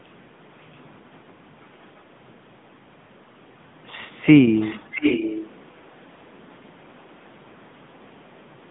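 Throughout the speech, the AMR narrowband mobile codec confines the sound to roughly 150 Hz to 3.6 kHz and leaves a plainly audible buzzy, synthetic edge. The codec rebuilds speech from a vocal-tract model and sparse pulses, and the roughness fits the 10.2 kbps mode. Unlike simple low-pass filtering, the damage is a coarseness within the voice itself.

At 4.80 to 4.83 s comes a lost AMR speech frame. The decoder filled the gap by repeating its last good pitch and vocal-tract settings at reduced gain, giving a brief dip or warble that points to a single 20 ms frame. It sounds like a smeared, momentary wobble, not a hard click or a dropout to silence.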